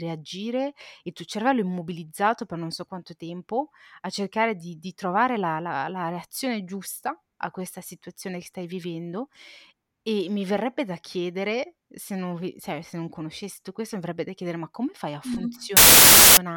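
File tags played as audio, from 15.77 to 16.37 s: right after the speech reaches "ma come fai a", the clip breaks into a sudden 0.6 s burst of very loud white noise with hard edges at both ends. The noise is an embedded cover picture being decoded as though it were samples. Its compressed bytes are essentially random, so it plays as flat, very loud static instead of any structured sound.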